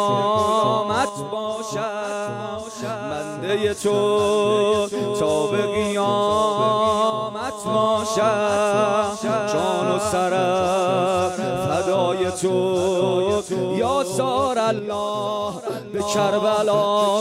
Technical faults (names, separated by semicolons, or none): one channel drops out